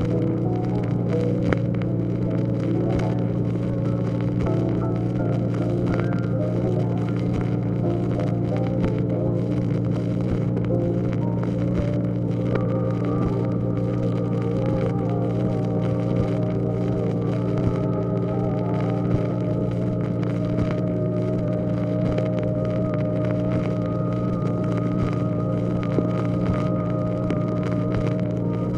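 Nothing technically wrong turns up anywhere in this audio, so there's no problem here to point to or explain.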